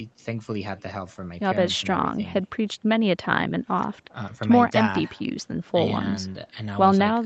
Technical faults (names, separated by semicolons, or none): echo with no canceller